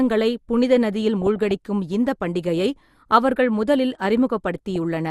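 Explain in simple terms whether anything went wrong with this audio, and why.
Weak digital radio reception let corrupted data slip past error correction, causing DAB burbling: short blips of noise over the speech from 1.22 to 1.51 s and briefly at 4.76 s.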